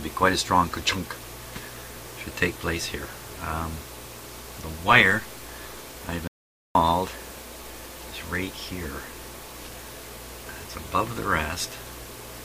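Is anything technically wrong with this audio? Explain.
Yes. From 6.28 to 6.75 s there is an audio dropout to silence: the input was likely lost while recording continued, so the sound cuts to silence for about 0.47 s, with no room tone.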